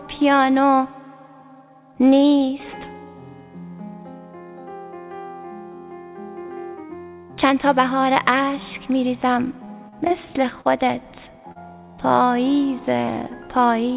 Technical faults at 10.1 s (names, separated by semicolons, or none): short concealed packet loss